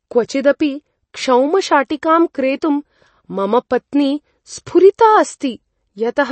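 Speech with plainly audible MP3 compression throughout, likely from a low-bitrate encode near 32 kbps. A spectrogram shows a hard ceiling at 8.3 kHz, with flickering gaps below it where weak frequency lines drop in and out.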